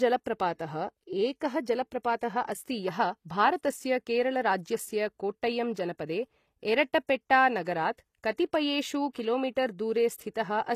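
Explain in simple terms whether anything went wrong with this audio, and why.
The speech has been squeezed by a lossy codec, and the damage is plain to hear. The high end sounds false. S sounds come out gritty and lispy, and nothing is left above 14.9 kHz. This is most likely HE-AAC compression. It keeps only the lower frequencies properly and then fakes the treble by copying lower sounds upward. Those copied sounds never match the real ones, so they ring wrong.

There is also pre-echo in three places. A short hiss appears just before a sharp sound begins: from 7.64 to 7.67 s (24 ms), at 9.13 s (19 ms), and from 10.34 to 10.36 s (20 ms). The codec works on short blocks of sound and spreads its noise across each whole block. When a sudden sound starts late in a block, that noise leaks into the quiet moment before it. The start of the sound then seems soft and smeared.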